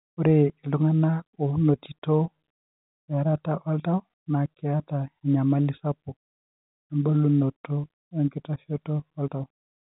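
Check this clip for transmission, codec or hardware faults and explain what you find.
No transmission, codec or hardware faults turn up in this clip.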